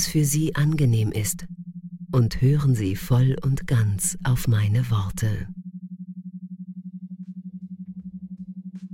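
No technical faults can be heard at any point in the clip, so there is nothing to describe in time order.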